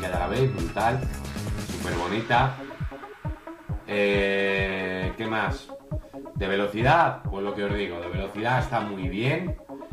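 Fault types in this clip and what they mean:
No fault of any kind can be heard in this clip. There is nothing to report.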